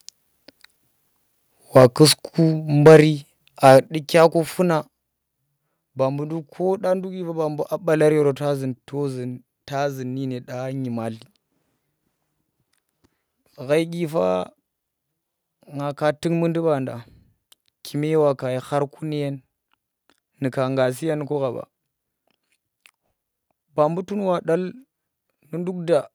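Speech, with a harsh, crackling edge on the loudest syllables at 1.76 to 2.04 s, 2.86 to 3.0 s and 3.65 to 3.74 s. This is microphone overload. The peaks go about 4, 7 and 3 dB past the converter's limit and their tops are flattened. The worst burst, at 2.86 s, has the most squared-off waveform. The likely cause is an input volume set too high for the converter. During that burst, at 2.87 s, the voice and the background drop together by about 3 dB. A second drop of about 6 dB follows at 3.87 s, just after the third burst. This is the microphone volume stepped down. Each cut happens in one sudden step, not as a gradual fade. The likely cause is the call software reacting to the clipping by lowering the device's input volume.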